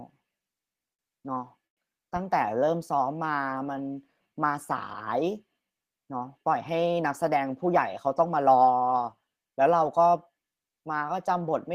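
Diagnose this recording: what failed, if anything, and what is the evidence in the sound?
The network and jitter-buffer stage failed, producing repeated stalls (stutter) between 0.73 and 1.80 s. Packets arrived late or too slowly, the playout buffer emptied six times, and the receiver held the last sound to bridge each gap: about 193 ms in total, the longest 98 ms, roughly 18% of that span. Nothing is lost, but the audio drags. On a spectrogram the harmonics freeze into flat, smeared bands, and the waveform shows short stretches of repeated cycles.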